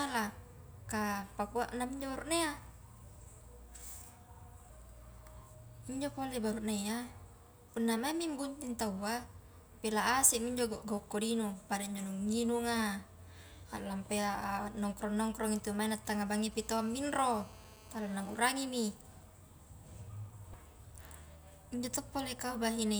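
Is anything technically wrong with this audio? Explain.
Yes. From 15.2 to 16.62 s there are GSM signalling bursts. A nearby 2G phone's radio pulses are rectified, giving galloping ticks and short 217 Hz buzzes, roughly 20 dB below the speech. From 16.62 to 18.39 s a steady GSM phone buzz follows as the phone enters a call. It is a hard, raspy 217 Hz tone, about 23 dB below the speech.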